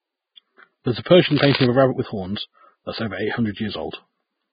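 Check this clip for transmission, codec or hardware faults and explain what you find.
Three faults can be heard: codec damage throughout, one pre-echo, and one burst of scratching.

The whole speech clip has heavy codec damage, with nothing above 4.9 kHz. The treble is hissy and grainy, and attacks are blurred. The likely cause is Vorbis compression at a low bitrate, around 14 kbps. Coarse quantisation of the residue above the spectral floor turns fine detail into noise.

From 1.03 to 1.06 s there is pre-echo. A short hiss, spread over 27 ms, comes just ahead of an attack. The codec spreads the noise sized for the loud attack across the whole block. That noise fills the quiet moment before the attack.

From 1.26 to 1.66 s, just before "of a rabbit with", dense scratching and rustling lies over the speech, about 5 dB below it. This is likely cable scratch noise. A worn cable, connector or control is moved, and its contact resistance changes rapidly.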